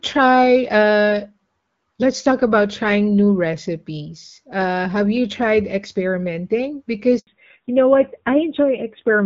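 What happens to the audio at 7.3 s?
Right after "have you tried experimenting", a handover gap from 7.19 to 7.27 s means no speech frames arrived while the call switched networks, so the speech cuts to 80 ms of silence. From 7.27 s to the end, a fallback to narrowband swaps the wideband HD Voice coding for an older narrowband codec, which fits roughly 7.4 kbit/s. Everything above 4 kHz is gone, leaving the speech duller and rougher.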